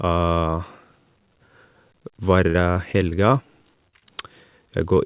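Repeated packet loss (robotic sound) runs from 2.5 to 3.13 s. Four separate holes open in the stream within that span, the longest 44 ms, and together about 120 ms of audio never arrives. Each time, the receiver extends the last stretch of sound to cover the hole before the next one hits, so about a fifth of the span is synthetic fill. The speech turns choppy there, with pieces dropping out.

Short concealed packet loss follows twice, at 3.89 to 3.95 s and again at 3.99 to 4.04 s. Roughly 40 ms and then 20 ms of audio fail to reach the decoder in time. The receiver bridges each hole by continuing the preceding sound and then crossfading back into the real signal. Each shows up as a brief smear or wobble. Throughout the clip the narrowband call path passes nothing above 4 kHz, which fits G.711 at 64 kbps.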